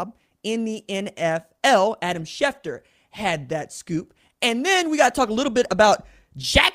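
No technical faults can be heard anywhere in this speech recording.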